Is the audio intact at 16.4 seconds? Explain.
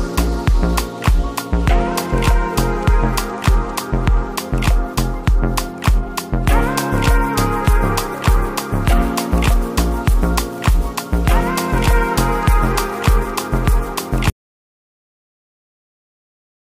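No. At 16.4 seconds the clip is inside an audio dropout to silence that begins at 14.3 s and runs to the end of the clip. The sound cuts off abruptly mid-flow and is replaced by silence, with no room tone or background noise underneath. The likely cause is that the input signal was lost, through a disconnected device, a failed link or a mute, while recording continued and wrote silence. Whatever occurred after 14.3 s is not recoverable.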